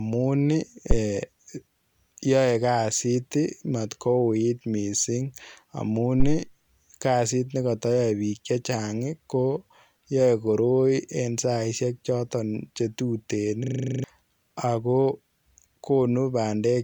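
A deep, low thump lands at 0.91 s, dying away within about 19 ms, and another follows from 6.2 to 6.43 s, right after "misssing amuun" and before "kazit nekatayae biik chechaang", decaying over about 51 ms. These are phantom power thumps: a supply switched on or off on a live input, its voltage step pushed through the coupling capacitors.

From 13.64 to 14.04 s, after "saisiek chotoon che tuteen", the audio turns into a rapid 25 Hz stutter-buzz. This is a system hang loop: the machine froze while the hardware replayed one 40 ms buffer ten times, losing roughly 0.4 s of audio.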